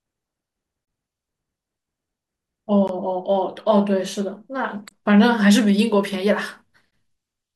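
Gaps at joins of encoded pieces fall at 0.85–0.88 s, 2.88, 4.89 and 6.91 s, every 2 s. Untrimmed encoder delay and padding leave 16–28 ms silences that break into the speech, which then carries on from where it stopped.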